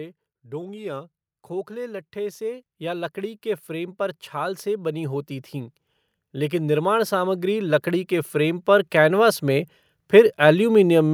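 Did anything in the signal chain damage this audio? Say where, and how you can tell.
Yes. From 0.62 to 1.49 s the speech slows by 5.76% and drops 103 cents, about a semitone, then snaps back. On a spectrogram the harmonic stack steps down and jumps up again. This is likely a drift correction step in the driver or buffer stage.

Automatic gain rising appears twice: about 7 dB from 1.67 to 5.81 s, then about 9 dB from 6.32 to 10.87 s. Call-processing AGC raised its gain, so the waveform envelope widens steadily and the background noise floor lifts along with the speech.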